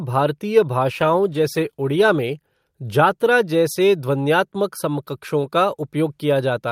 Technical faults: call bitrate drop

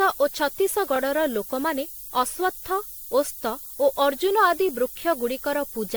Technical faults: low bit depth with noise shaping; generation loss

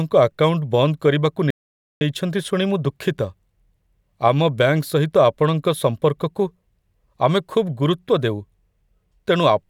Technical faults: audio dropout to silence

